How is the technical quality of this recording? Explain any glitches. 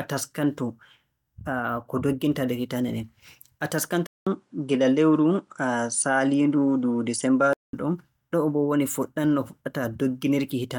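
The recording has one clear glitch, between 4.07 and 7.73 s. At 4.07 s the speech cuts out for about 0.2 s, then returns duller, with nothing above 10.5 kHz and a new background noise roughly 50 dB below the speech, though the loudness stays about the same. It clears again at 7.73 s. The likely cause is an input switched to a poorer device. The brief gap at the switch and the changed noise floor set it apart from a plain filter or EQ change.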